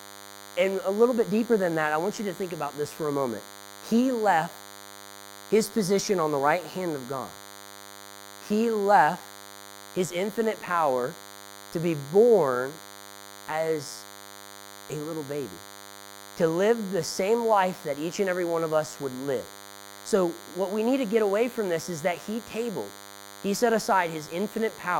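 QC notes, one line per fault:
throughout, DECT cordless phone buzz: a thin 100 Hz buzz, roughly 20 dB below the speech, from rectified radio bursts every 10 ms; its dense harmonics distinguish it from smooth mains hum.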